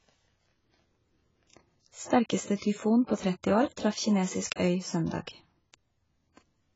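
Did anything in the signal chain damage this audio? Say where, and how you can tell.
Yes. Throughout the speech the sound is dull and smeared, with nothing above 7.6 kHz and a fizzy, warbling edge on sibilants. This points to the codec stage, likely heavy AAC compression at around 16 kbps, starving the coded frequency lines of bits.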